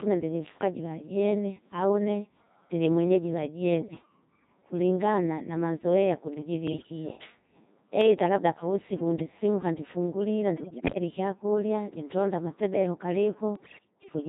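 Throughout, the speech passes through the Codec 2 vocoder at 2.4 kbit/s, rebuilt from pitch and envelope parameters as sine waves, so it sounds heavily robotic and buzzy. Bit errors on digital voice radio, a few percent of bits, corrupt frame parameters at 3.79–4.06, 6.68–6.90, 10.58–10.96 and 13.56–14.10 s, producing sudden pitch jumps, warbles and bleeping gibberish.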